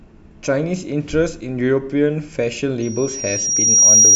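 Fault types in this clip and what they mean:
Loudspeaker feedback squeal: a piercing tone near 5.7 kHz rises from 2.82 s, swelling over about a second to roughly 10 dB above the speech and holding to the end. The microphone is picking up its own loudspeaker, and the loop gain exceeds one at that frequency.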